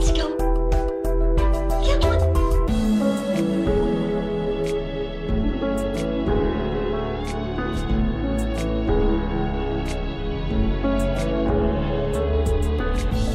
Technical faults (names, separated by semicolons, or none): none